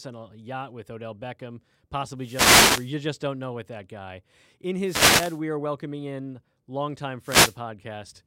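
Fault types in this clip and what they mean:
Wireless microphone noise hit: the FM radio link fades, so receiver hiss bursts over the speech three times, seen as broadband spectrogram smears.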